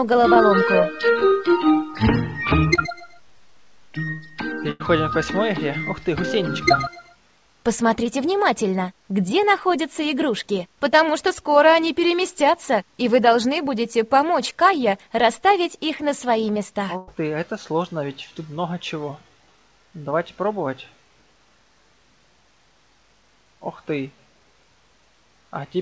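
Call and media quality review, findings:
Short concealed packet loss at 0.34, 1.19, 2.75 and 8.04 s: brief smear or wobble, about 20 ms of audio gone per event. Probable component: jitter buffer/decoder concealment extrapolating the last sound, then crossfading back. Distinguished from the bursts by its shortness.

Burst of packet loss at 4.71–4.82 s (about 80 ms missing) and 16.97–17.09 s (about 100 ms missing): last sound stretched into a held buzz or decaying hiss, then a jump ahead with material lost. Probable component: G.722 call path concealment (band stops at 8 kHz). Distinguished from the short losses by the audible fade and the skip.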